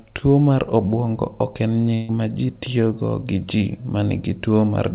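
A burst of packet loss on this speech recording, carried over a call path whose band stops at 4 kHz (consistent with a G.711 narrowband codec), wipes out about 140 ms of audio from 1.94 to 2.10 s. The receiver covers the gap by stretching and fading the last sound it had, so after "mar obwongo ok en" a held, dimming buzz or hiss replaces the real signal, and the voice jumps ahead to "ma ji tiyogo gi" with the intervening stretch lost.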